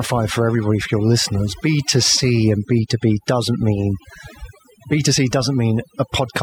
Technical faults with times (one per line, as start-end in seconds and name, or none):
0.00-6.42 overdone noise removal